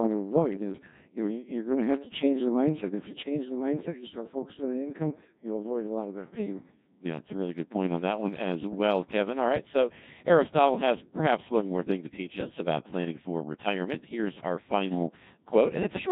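The speech sounds robotic and buzzy from start to finish, with a synthetic tone where natural vocal texture should be. This is the sound of the Codec 2 vocoder, and the damage is heavy. Instead of preserving the waveform, the codec transmits only pitch, voicing, energy and a rough spectral envelope, and the decoder rebuilds the voice from sine waves. The degree of degradation fits a very low bitrate of around 1.6 kbit/s.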